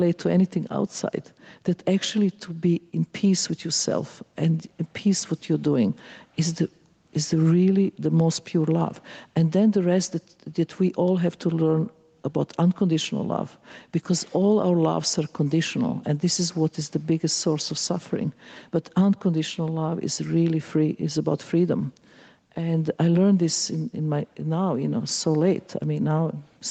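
From start to finish the level keeps breathing, with the sound ducking under each loud moment and rising again in the quieter stretches over a swing of about 5 dB. This gain pumping is likely from microphone gain set far too high, forcing a fast limiter or compressor to clamp down repeatedly and squash the dynamics. The call's microphone processing, with nothing above 8 kHz, is heard alongside this.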